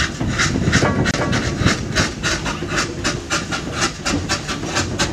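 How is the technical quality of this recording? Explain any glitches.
Two glitches stand out: a stretch where the sound is heard twice, and one brief dropout.

Doubled audio track, 0.40 to 2.51 s. A second, full-band copy of the same sound runs about 300 ms behind the first and about 5 dB quieter. It is likely a second capture of the signal through a slower path, or an edit that left two misaligned copies in place. With no decay or room colour on the trailing copy, it sounds like a dry, clean repeat rather than reverb. It appears and disappears abruptly at the edges of that span.

Gap at a join of encoded pieces, 1.11 to 1.14 s. A 27 ms hole opens in otherwise continuous sound, inside the doubled stretch. Each separately encoded piece carries the encoder's start-up delay and end-of-stream padding, and joining pieces without trimming these leaves silence at the seam. A repeat interval of 4.0 s fits pieces about that long. 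The codec blurs the gap's edges, so it sounds like a quick drop before the sound resumes where it left off.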